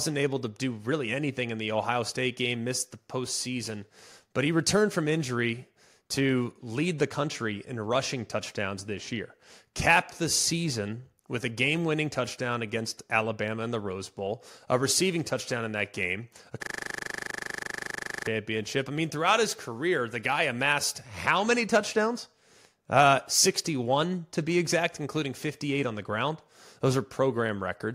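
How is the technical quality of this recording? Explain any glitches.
The recording has one serious glitch, a system hang loop. From 16.63 to 18.27 s, just after "in that game a", the speech freezes. A 40 ms slice repeats about forty times while the system stalls and the hardware keeps replaying its buffer. It sounds like a rough, steady 25 Hz buzz.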